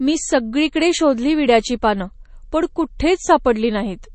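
Right from the start and all the way through, the speech carries what is likely MP3 compression, and it's plainly audible. There's nothing above about 8.3 kHz, so the top end just stops, the sign of an encoder short on bits chopping the treble, which fits a rate around 32 kbps. Weak frequency lines flicker in and out between frames, giving that watery, swirly texture, with chirpy s sounds and smeared consonant attacks.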